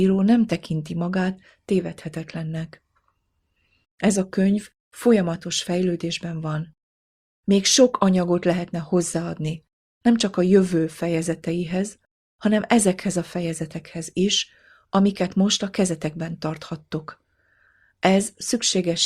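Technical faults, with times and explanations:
No technical faults can be heard in this clip.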